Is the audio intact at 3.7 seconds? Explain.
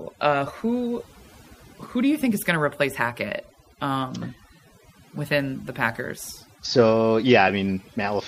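No. At 3.7 seconds the speech is affected by overdone noise removal, which runs through the whole clip. A noise reducer set far too aggressively shuts down individual frequency bands whenever their level sits near its noise estimate, taking quiet speech detail with them. The gaps between words drop to near silence dotted with twinkling specks. A low-bitrate codec smears transients more evenly, rather than leaving that gated, sparkling silence.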